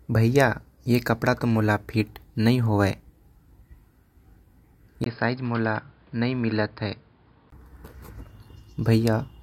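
At 5.04 s a 20 ms gap opens, and until 7.52 s the speech turns dull and boxy, with nothing above 5.1 kHz, a few dB quieter and carrying its own faint background noise. This is likely an input switched to a poorer device.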